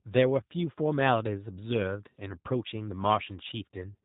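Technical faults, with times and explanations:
Throughout, G.729 codec: speech rebuilt from a vocal tract model and sparse pulses sounds plainly rough, fitting 8 kbit/s; the spectrogram is empty above 3.8 kHz.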